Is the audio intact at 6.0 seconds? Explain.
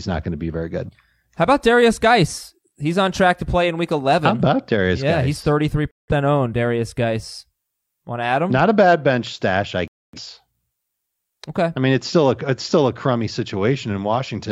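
No, there's a digital broadcast dropout from 5.93 to 6.13 s: the receiver lost good frames and muted, so the speech just cuts out briefly.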